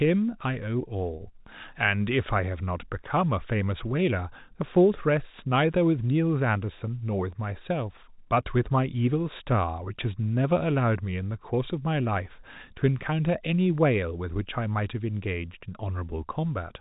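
No technical faults occur at any point in the speech, which carries the band-limited sound of G.711 telephone coding throughout.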